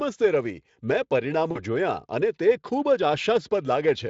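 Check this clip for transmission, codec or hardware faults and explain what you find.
One transmission fault stands out: VoIP packet loss concealed by the speech codec, from 1.51 to 1.61 s, just after "રવિ મેં". About 40 ms of audio went missing, which fits two lost 20 ms frames. The decoder filled the gap by repeating its last pitch and spectral shape at falling gain, so the sound smears into a short buzzy tone or coloured noise that fades, and recovery drags on briefly after packets return. On a spectrogram, this shows as a flat, stretched pattern that thins out. The waveform shows a repetitive, decaying stretch. The Speex coding itself adds only light damage.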